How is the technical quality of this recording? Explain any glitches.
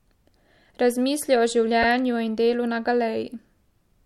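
There is one glitch, a short stutter from repeated frames at about 1.82 to 1.87 s. A stretch of the compressed stream about 52 ms long, which fits a couple of codec frames, was delivered twice, so the decoder played that slice of speech and then played it again. The result is a brief hiccup where the same fragment sounds back to back. The recording runs about 52 ms longer as a result.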